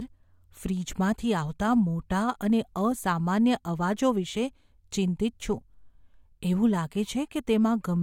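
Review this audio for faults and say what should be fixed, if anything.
No faults heard in the speech; nothing to fix.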